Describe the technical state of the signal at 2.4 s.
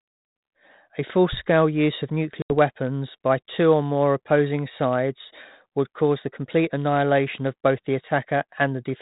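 At 2.42 s, just after "use of", packet loss on an ADPCM call cuts an 80 ms hard-edged silence, roughly a few packets, until 2.51 s. The decoder's predictor and step size lose track, so "weapons by two or" returns slightly rough before settling.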